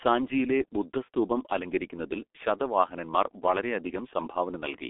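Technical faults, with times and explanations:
throughout, G.723.1 codec: the speech is muffled, hoarse and boxy, with smeared consonants, thin lows below 250 Hz and nothing above 3.7 kHz. The heavy damage fits a 6.3 kbit/s telephony codec whose slow 30 ms voice model cannot follow quick sounds.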